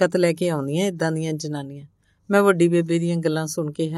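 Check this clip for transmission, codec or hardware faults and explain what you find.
No transmission, codec or hardware faults are audible here.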